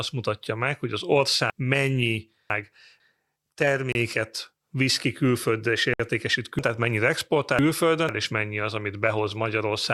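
Just after "mutatja meg hogy az", the speech from 1.5 to 3.0 s comes out jumbled. These are chunks out of order: a 0.5 s chunk arrived two chunks late and played after the two that should follow it.

At 3.92 s a hard-edged hole of about 27 ms cuts the sound. After "visz ki külföldre és", a second hole of 60 ms runs from 5.94 to 5.995 s. Both are a gap between stream segments at the 2 s segment boundaries, where the timestamps left a small space that the player filled with silence.

From 6.59 to 8.09 s, just before "és mennyi az", the same jumbled out-of-order pattern returns, with a 0.5 s chunk again played two chunks late.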